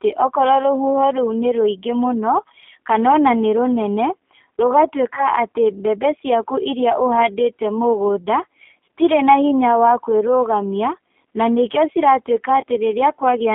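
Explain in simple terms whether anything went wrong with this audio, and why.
Yes. The whole clip went through the G.729 codec, a low-rate phone codec, so the speech sounds thin, slightly rough and synthetic, with nothing above about 3.4 kHz. There's also VoIP packet loss concealed by the speech codec at 5.15–5.25 s and 12.61–12.64 s. Each brief dropout, which fits a single lost packet, gets patched with a short buzzy or noisy smear that takes a moment to recover.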